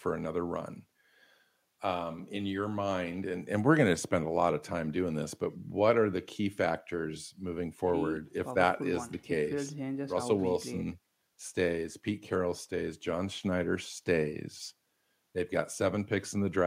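No technical faults can be heard anywhere in the speech recording, from its first moment to its last.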